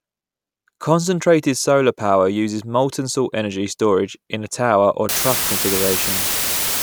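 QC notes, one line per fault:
5.09 to 6.83 s, low bit depth with dither: the speech drops to a 3-bit signal with dither added before rounding, so a steady, even white hiss sits at roughly the level of the speech itself. Unlike undithered quantisation, no gritty distortion follows the signal.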